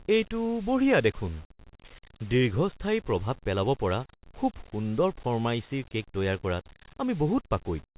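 No technical faults can be heard anywhere in this speech.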